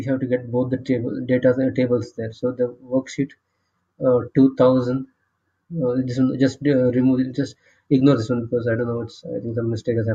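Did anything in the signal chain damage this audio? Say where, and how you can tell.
No, nothing in the chain from capture through playback audibly damages this audio.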